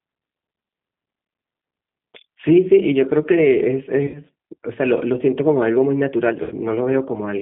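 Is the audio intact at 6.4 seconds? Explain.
No. From 6.43 to 6.55 s there is VoIP packet loss concealed by the speech codec. About 80 ms was lost, which fits eight 10 ms frames. The decoder extended its last pitch and filter, producing a fading buzzy tone or coloured noise that shows as a shrinking waveform. Throughout, the G.729 codec at 8 kbit/s leaves rough, synthetic audio, with a spectrogram that is empty above 3.6 kHz.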